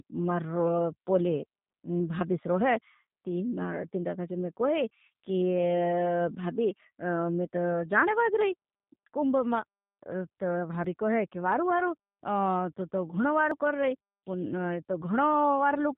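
Throughout, the speech has passed through a G.729 codec, which does not send the waveform itself. It sends a vocal tract filter, a pitch predictor and a handful of pulses for every 10 ms frame, and the decoder rebuilds the speech from those. The damage is plainly audible. Nothing survives above 4 kHz, so the speech sounds narrow and muffled, and its rebuilt texture comes out rough and slightly synthetic, which fits the 8 kbit/s G.729A variant.

At 10.84 s and again at 13.51 s, the cause is likely a dropped buffer (overrun): the software fell behind, and the hardware overwrote a block of samples before they were read. Each time, a slice of roughly 20 ms vanishes and the audio on either side is butted together with no gap of silence. What you hear is a sudden skip forward in the speech.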